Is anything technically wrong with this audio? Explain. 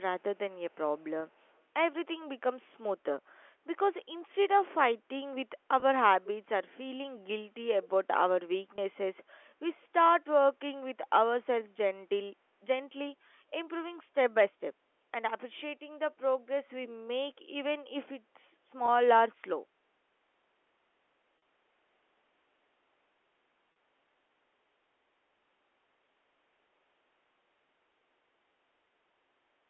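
Yes. The speech has two faults: a faint echo leak near the start and several short packet losses bridged by pitch repetition.

Echo leak occurs at 0.2 to 0.38 s, 0.71 to 0.76 s and 1.35 to 1.58 s. A delayed copy of the speech, trailing it by 181 ms, surfaces in brief scraps at a very low level, roughly 40 dB under the direct sound. The likely cause is a far-end loudspeaker whose echo canceller left some of the microphone pickup in place, so that residue was sent back down the line.

Packet loss with pitch repetition appears six times. There are 20 ms gaps at 1.20, 5.80, 8.76 and 18.86 s, each consistent with one missing packet, and 40 ms gaps at 21.38 to 21.42 s and 23.72 to 23.76 s. In each case the receiver filled the hole by repeating the last pitch period. The short gaps come across as a slight buzzy hold on the sound. The longer two carry the held tone further before the signal resumes.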